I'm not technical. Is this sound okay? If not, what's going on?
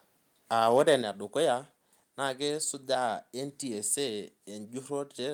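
No, not quite. Between 0.62 and 0.94 seconds the loudest part of the voice turns harsh and crackly. That's microphone overload: the mic's input was likely set too high, so the strongest moments tried to go past the loudest level the mic's converter can handle, and their tops got sliced flat. Only a small fraction of the sound is affected, but in that stretch you can hear a rough, buzzy edge.

Then at about 1.02 seconds the whole thing, voice and background together, suddenly drops a notch in loudness and stays there. That's the microphone volume stepped down. The most likely cause is the call software noticing the distortion a moment earlier and turning the mic's input down in one quick jump, which is why you hear a sudden step rather than a gradual fade.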